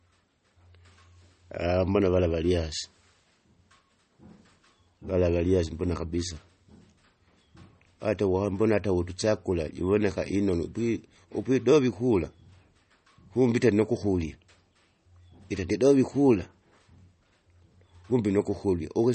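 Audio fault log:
Throughout: MP3 compression. The speech sounds watery and swirly, with nothing above 8.4 kHz. This is likely a low-bitrate MP3 encode, consistent with roughly 32 kbps, where the encoder cut the treble and dropped weak frequency lines that flicker between frames.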